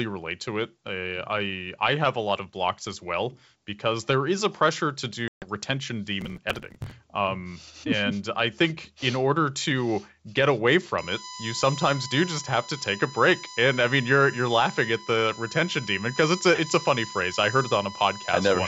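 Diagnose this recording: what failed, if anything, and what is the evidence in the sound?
Network stage: packet loss on an ADPCM call from 5.28 to 5.48 s. About 140 ms drops to hard-edged silence, which fits roughly fifteen lost packets. The speech then comes back slightly distorted as the decoder's predictor and step size resynchronise. On the waveform this appears as a flat gap.

Driver or buffer stage: processor overload crackle from 6.21 to 6.92 s. Dozens of buffers of around 5 ms each were skipped outright, leaving tiny gaps with abrupt edges that add up to gritty tearing. On the waveform you see many small discontinuities. The spectrogram shows dense vertical broadband streaks.

Analogue wiring or power stage: USB whine from 10.98 s to the end. Bus framing current leaks in as a fixed 1 kHz tone with harmonics, strongest at 20 kHz, at about 10 dB below the speech. On the spectrogram these are steady horizontal lines, and the G.722 coding band shows no damage of its own.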